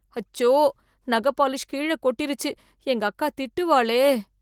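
Speech clip; nothing technically wrong can be heard.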